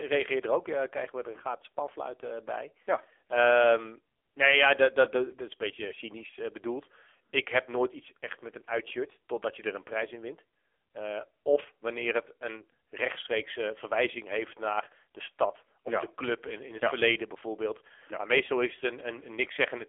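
Speech squeezed through an AMR narrowband mobile codec the whole way: band-limited to roughly 300 Hz to 3.4 kHz, nothing above 3.5 kHz, and heavily buzzy and synthetic, which fits a low bitrate around 6.7 kbps.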